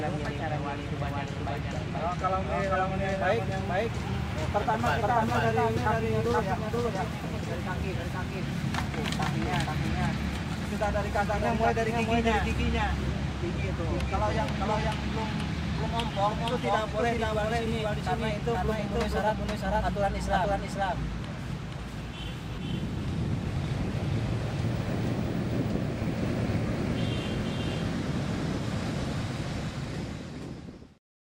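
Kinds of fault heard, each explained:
Doubled audio track: A second copy of the whole sound runs alongside the first, trailing it by about half a second. The copy is roughly as loud as the original and covers the full frequency range. It carries no decay or room colour, so it reads as a clean repeat rather than an echo. It is present for the entire clip. The likely cause is the same signal being captured twice, once through a slower path.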